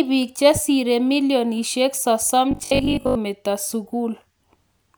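Speech, with a robotic sound from repeated short buffers at 2.51 to 3.17 s, just after "tibiik chesire milionishek sosom": a rigid, metallic 50 Hz buzz, likely from looping about half the time on 20 ms buffers.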